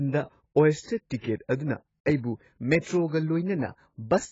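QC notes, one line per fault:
Throughout, AAC compression: speech is dull and smeared with nothing above 7.6 kHz, likely heavy AAC-LC coding that fits a bitrate near 16 kbps.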